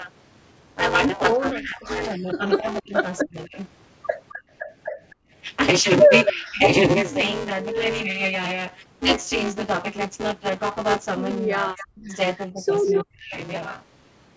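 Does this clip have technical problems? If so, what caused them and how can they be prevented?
Yes. Buffer tearing runs throughout. The writer and reader of the audio ring buffer have slipped, so roughly half of each period replays audio about 10 ms old. That produces a 188 Hz rattle, consistent with a 256-sample buffer. A spectrogram shows evenly spaced vertical stripes during speech, and the waveform shows hard joins. Prevent it by keeping buffer pointers synchronised and sizing buffers with enough headroom.

Speech suppressed in double talk appears at 1.52–3.55, 6.31–6.66, 8.03–8.24 and 11.54–13.36 s. The speech dips by up to roughly 40 dB, though only slightly at 8.03 s, likely because the echo canceller turned down both talkers. These show as ragged gaps in the waveform and as missing spectrogram energy. Prevent it with an echo canceller tuned for full-duplex double talk.

Background gated by the echo canceller occurs between 4.36 and 5.31 s. 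The room sound drops by about 28 dB for brief stretches, totalling around 0.4 s, while the far end plays. On a spectrogram the noise floor goes blank and then returns. Prevent it by using gentler suppression or comfort noise.

Echo leak appears at 6.26, 11.77–11.85 and 12.86–13.04 s. A copy of the speech returns 261 ms later, about as loud as the original at first and roughly 15 dB and then 5 dB below it afterwards. The likely cause is incomplete echo cancellation of the loudspeaker sound. A spectrogram shows a delayed duplicate pattern, below the 8 kHz ceiling. Prevent it with headsets or a better-converged echo canceller.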